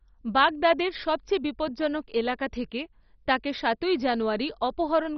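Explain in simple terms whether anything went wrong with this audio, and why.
Something did go wrong: the whole speech clip sounds muffled and strongly gurgly, with nothing above about 6 kHz. That's most likely MP2 compression squeezed too hard, so the codec switched off the upper bands and left the rest coarse and grainy.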